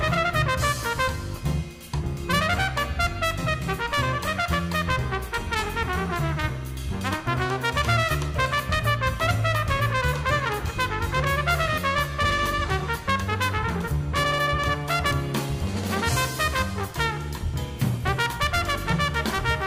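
No technical faults occur in this audio, so there is nothing to describe in time order.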